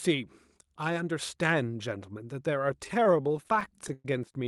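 Speech clip with repeated stalls (stutter) from 2.84 to 4.05 s: packets arrived late, so the jitter buffer kept running dry and the receiver stretched the last sound, the longest hold about 113 ms, dragging the audio for roughly a quarter of that span. At 4.24 s a sudden gain jump drops the speech and background together by about 12 dB until 4.34 s, likely a digital gain change applied without a ramp.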